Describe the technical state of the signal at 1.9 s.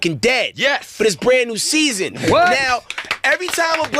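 At 1.9 s the signal is intact, with no dropout, distortion, glitch or other fault audible at that moment.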